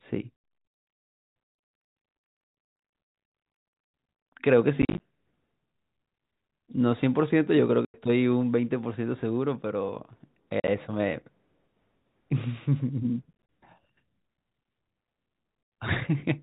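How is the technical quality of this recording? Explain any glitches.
The main problem is packet loss filled with silence, in seven bursts at 0.36, 2.45, 4.82, 7.85, 10.6, 13.33 and 15.63 s, each lasting 50 to 100 ms. Missing packets were replaced by dead silence, so the speech drops out with hard edges. The gaps come in steps that fit 10 ms packets. At 2.45, 4.82, 10.6 and 13.33 s they're scattered short holes rather than one block. The G.711 telephone coding underneath sounds like ordinary phone-band audio topped out at 4 kHz.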